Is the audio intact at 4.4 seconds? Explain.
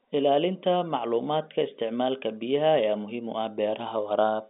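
Yes, at 4.4 seconds the speech runs without interruption, carried in the narrow telephone band of its G.711 coding.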